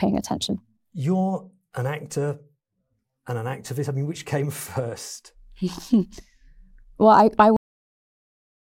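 At 7.57 s the speech stops dead in the middle of a sound. This is a cut-off end. The final stretch of audio was never written out or played back, so the recording simply ends there. There is no natural decay and no fade. The sound falls straight to digital silence, which fills the rest of the clip, a little over a second. The last syllable is left clipped and unfinished.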